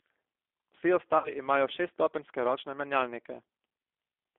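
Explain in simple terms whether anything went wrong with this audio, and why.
G.729 codec, throughout the clip: the speech has been squeezed through a low-rate phone codec that doesn't send the actual sound. It sends a compact recipe (the shape of the mouth and throat, the pitch, and a few pulses) and rebuilds the speech from it. The result is plainly rough and slightly synthetic, and everything outside roughly 300 Hz to 3.5 kHz is gone, so the speech sounds thin and telephone-like.

VoIP packet loss concealed by the speech codec, at 1.18 to 1.33 s and again at 3.57 to 3.59 s, just after "šeststopenjske ročne menjalnike": pieces of the call went missing, about 60 ms in the first gap, which fits three lost packets, and 20 ms in the second. The decoder filled each hole by stretching the last sound it had into a fading buzzy tone or noise. Because each rebuilt slice depends on the previous one, the first gap leaves the speech weak or smeared a little past 1.33 s.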